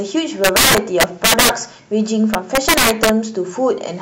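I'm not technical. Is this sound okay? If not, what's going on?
No. Between 0.44 and 1.49 s, and again from 2.34 to 3.09 s, the speech breaks into harsh cracks. This is integer overflow: loud peaks exceed the largest number the audio can store and wrap to the opposite extreme instead of being capped. The first stretch is pushed harder and cracks more.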